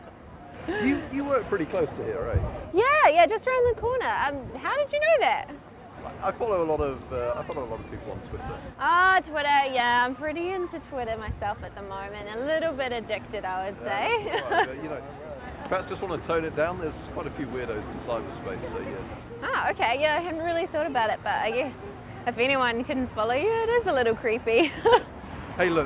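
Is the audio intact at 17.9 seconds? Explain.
Yes, at 17.9 seconds the audio is intact, with no dropout, click, glitch or other fault.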